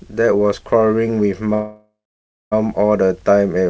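At 1.54 s the speech hits a call audio freeze that runs to about 2.54 s. Packets were likely stalled, so the last sound is stretched into a fading buzz that settles into roughly 0.58 s of silence. Then the speech picks up where it left off, with nothing lost, just a one-second gap added. The G.722 call path shows in the treble cut at 8 kHz.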